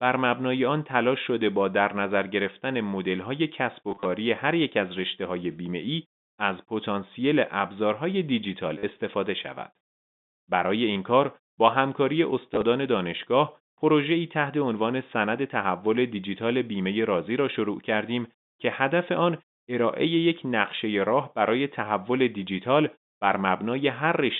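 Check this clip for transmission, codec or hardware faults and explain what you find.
One fault recurs, packet loss with last packet repeated, in four places. The sound travels as G.711 telephone coding, whose 150 Hz to 3.7 kHz line band frames everything heard.

Packet loss with last packet repeated occurs at 3.89 to 4.05 s (90 ms lost, scattered, longest run 30 ms), 8.78 to 8.83 s (50 ms), 10.93 to 10.96 s (30 ms), and 12.54 to 12.62 s (30 ms, scattered). Missing stretches were filled by replaying the previous packet. The repeats don't follow the pitch, and longer runs buzz around 100 Hz, which fits 10 ms packets. The result is a brief robotic stutter.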